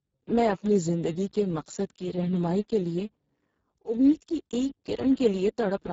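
Throughout the clip the speech carries heavy Speex codec damage: a hoarse, buzzy, near-robotic quality from a starved excitation signal, which points to a very low rate around 5.8 kbps. Nothing sounds above 7.6 kHz. Unlike transform codecs, it produces no warbling or smeared pre-echo, only rasp.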